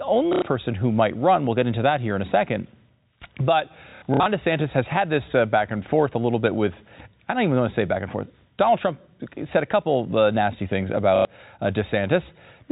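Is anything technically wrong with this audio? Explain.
Yes. Packet loss with last packet repeated occurs at 0.33 to 0.42 s, just before "person who might run"; from 3.9 to 4.26 s; and at 11.16 to 11.25 s, just after "couple uh nasty things". When packets went missing, the receiver replayed the last good one until new audio arrived. The first and third gaps cover 90 ms each, which fits three 30 ms packets. The middle gap loses 210 ms, scattered across 360 ms, with the longest run lasting 60 ms. Each gap sounds like a short robotic stutter, and the joins can click. The audio passes through G.711 telephone coding, which limits it to the band below 4 kHz.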